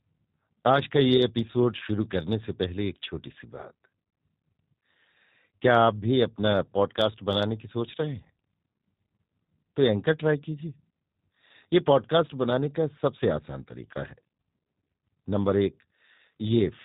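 From start to finish the speech carries a G.729 codec sound, and it's plainly audible. Everything above 4 kHz is gone, so the voice sounds boxed-in and telephone-narrow. On top of that there's a rough, slightly synthetic edge, because the codec rebuilds each short frame from a vocal tract model, a pitch predictor and a few pulses rather than the real waveform. That thin, buzzy character fits the 8 kbit/s G.729A variant.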